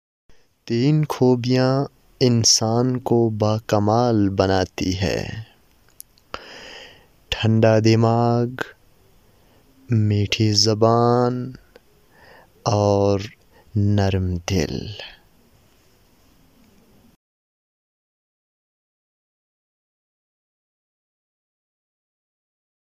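Nothing in the audio points to a technical fault at any point in the clip.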